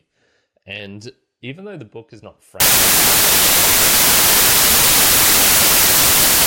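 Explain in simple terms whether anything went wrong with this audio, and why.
Samples built from the wrong bytes, from 2.60 s to the end, just after "the book is not": the player misreads how each sample's bytes fit together, so tiny rapidly changing details become the loudest part, and the speech turns into harsh, loud hiss.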